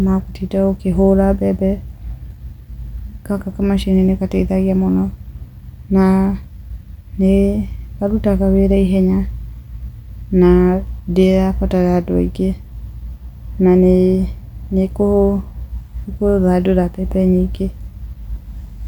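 Nothing in this recording trips any alarm: no dropouts, glitches or other technical faults turn up anywhere in it.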